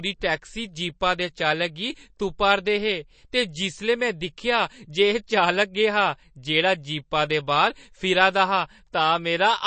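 Throughout, MP3 compression is plainly audible: nothing above 8.3 kHz, watery swirling speech, likely from a low bitrate around 32 kbps; spectrogram shows flickering holes.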